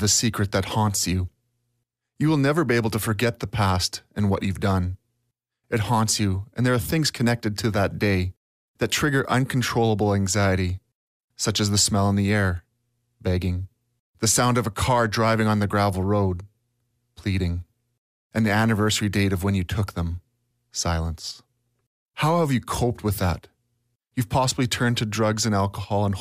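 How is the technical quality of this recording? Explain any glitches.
No glitches or technical faults can be heard here.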